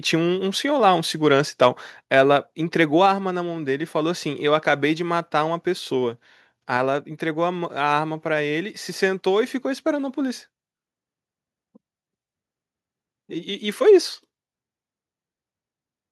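From 1.61 to 1.67 s the loudest peaks crackle harshly, likely from microphone overload pushing the converter about 3 dB past its limit. On the waveform a small share of peaks appear flat-topped, and the spectrogram shows a broadband smear above the voice. At 2.04 s voice and background drop together by 3 dB, likely a microphone volume stepped down, which shows as an abrupt step in the waveform envelope. From 2.18 to 2.20 s a milder overload, about 1 dB over, likely flattens a few peaks again with a brief, fainter crackle.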